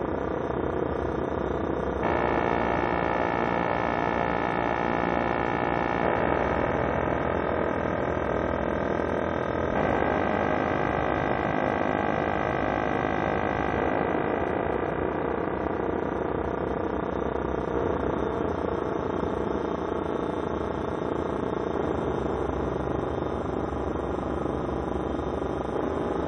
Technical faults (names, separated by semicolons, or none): damaged data in a compressed stream